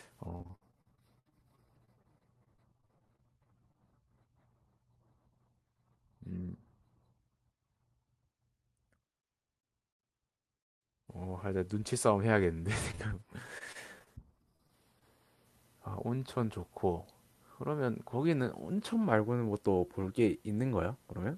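From 0.35 to 3.76 s there's repeated packet loss giving that robotic sound: 25 gaps, the longest 62 ms, each patched by stretching the last bit of audio. About a fifth of the stretch is filled-in sound, so it turns choppy. The same thing returns more lightly from 12.91 to 15.03 s, with 12 gaps, the longest 26 ms, and about 11% concealed.

In between, from 5.13 to 6.32 s, there's a jitter buffer speed-up. The receiver had too much audio queued, so it trimmed short pitch-period chunks, around a tenth of a second in total. The speech runs at 107% of normal speed with no change in pitch, and it sounds a bit hurried.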